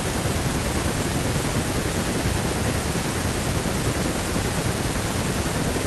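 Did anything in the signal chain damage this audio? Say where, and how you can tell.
No, no stage of the chain left any audible damage on this speech recording.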